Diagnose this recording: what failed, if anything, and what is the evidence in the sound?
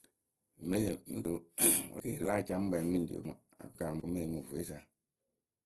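The codec stage: the speech sounds rough and grainy and stops dead at about 12.2 kHz, which fits Opus compression at a low rate, around 16 kbps.

The buffer or network stage has chunks out of order. From 1.25 to 2.25 s a 250 ms chunk lands three slots late, and from 3.25 to 4.0 s one lands two late, giving jumbled bits with hard joins.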